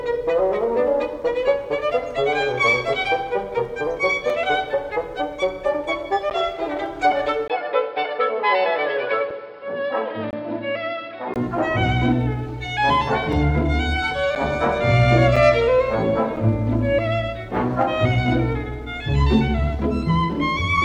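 At 4.30 s and 6.30 s, a gap between stream segments drops a hard-edged silence of a few to about 12 ms into the sound. Segment timestamps fall short at 1-second boundaries.

From 7.48 s to 11.36 s, the input likely switched to a poorer device. After a 20 ms dropout the sound turns dull, loses everything above 5.3 kHz, falls about 5 dB and gains a faint noise floor. It clears again at 11.36 s.

The segment gaps continue at 9.31 s, 10.31–10.33 s (the longest, about 22 ms), 13.33 s, 14.35 s, 15.36 s and 16.36 s.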